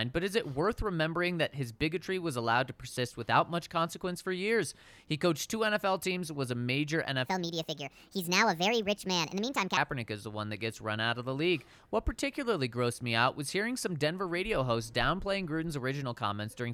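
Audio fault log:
7.26–9.77 s, section at the wrong speed: the speech suddenly runs 1.46 times fast, hurried and raised by about seven semitones, then snaps back just before "is the one that". Speed and pitch shift together, likely from playback against the wrong clock.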